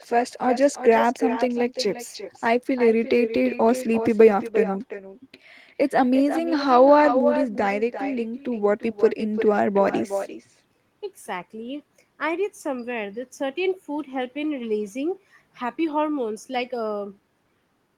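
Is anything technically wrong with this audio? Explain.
Yes. Echo with no canceller runs through the whole speech clip. Each phrase returns about 9 dB quieter, roughly 0.4 s later. A far-end loudspeaker feeds the microphone, and nothing removes it. The copy sounds thinner, trailing every phrase.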